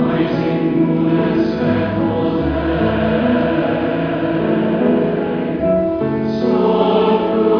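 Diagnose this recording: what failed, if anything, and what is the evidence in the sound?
Nothing failed: no stage in the chain, from capture to playback, leaves an audible mark on the sound.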